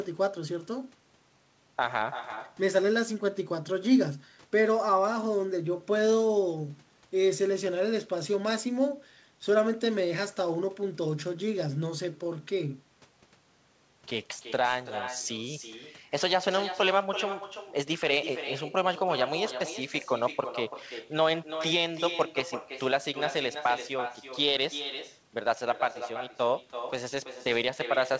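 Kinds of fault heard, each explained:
Echo with no canceller: speech is shadowed about a third of a second later by a copy about 10 dB quieter, the far-end loudspeaker leaking back uncancelled.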